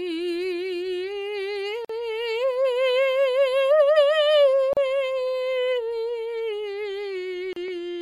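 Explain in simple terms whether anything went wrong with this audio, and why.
The music drops out three times for a split second, at 1.85 s for about 47 ms, at 4.73 s for about 37 ms and at 7.53 s for about 33 ms, then picks up where it left off. This is a gap at a join of encoded pieces: the music was compressed in separate chunks and stitched together untrimmed, so each chunk's built-in lead-in silence and end padding remained as a short hole.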